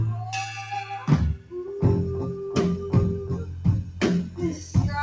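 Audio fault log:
Throughout: noise suppressor applied to music or sounds. A speech-oriented noise suppressor stayed active and kept judging steady tones, ambience and reverberant tails to be noise, so it repeatedly turned them down while sharper onsets passed mostly intact. The gain it applies rises and falls by roughly 5 dB as it changes its mind, which is heard as a pumping and thinning of the sustained parts. The call path's band limit, with nothing above 8 kHz as fits G.722 at 64 kbps, sits underneath this.
0.24–0.71 s, 1.34–1.53 s, 4.58–4.75 s: sound cut by the noise suppressor. In each span the suppressor classified the ongoing sound as noise and pulled it below the surrounding level, sinking held or decaying material rather than attacks. The dips are about 5 dB in the first span, about 10 dB in the second and about 6 dB in the last. Each lasts a few hundred milliseconds at most, so they are heard as brief sags or clipped-off tails.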